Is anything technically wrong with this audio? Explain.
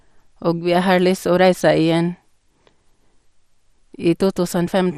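Yes. Throughout the speech, the sound is dull and carries a gurgling, granular roughness that is plainly audible, likely from MP2 compression at a rate that fits about 64 kbps. The encoder divides the signal into 32 sub-bands and, short of bits, switches upper bands off and coarsely quantises the rest. A spectrogram would show nothing above 14.4 kHz, with blocky patches in the upper bands flickering in and out over time.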